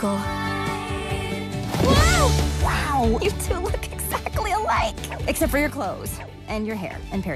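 At 5.70 s the level drops by about 5 dB in a single step and stays down through the end of the clip. This is a sudden gain jump: the digital gain changes between one sample and the next with no ramp, likely from a gain setting or bit shift applied instantly. The sound and its background noise fall together, so the noise floor steps down by the same amount, which marks it as a gain change rather than a change in the source.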